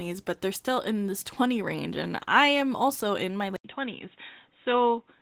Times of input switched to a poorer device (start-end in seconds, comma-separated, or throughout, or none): 3.56-5.21